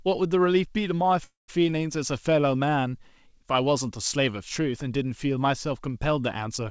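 Speech carried over a wideband call link, with nothing above 8 kHz, which fits a G.722-style codec. At 1.24 s the sound stalls in a call audio freeze, until 1.50 s. The last sound is stretched into a fading buzz, then about 160 ms of silence. The speech then resumes where it stopped, about 240 ms later than before. The likely cause is delayed packets draining the jitter buffer.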